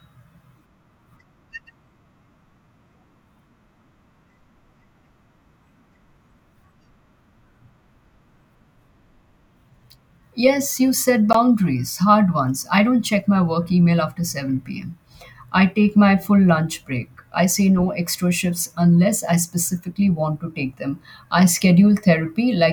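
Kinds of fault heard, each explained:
Block of digital silence: At 11.33 s, just after "you set", the speech drops to silence for 16 ms and then returns. The samples in that stretch were replaced by zero values, most likely because the output buffer was not filled in time. There is no fade in or out. The waveform jumps straight to silence and straight back. At this length the gap is heard as a short hole in the speech.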